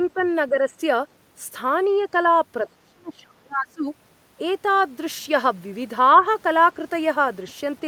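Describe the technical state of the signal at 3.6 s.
At 3.6 s the speech is suppressed in double talk, within a span from 2.65 to 3.86 s. The level falls sharply, by about 30 dB at its deepest, likely because an echo canceller mistook the talker for loudspeaker echo during overlap. The waveform shows a collapsed envelope, and the spectrogram shows energy thinning.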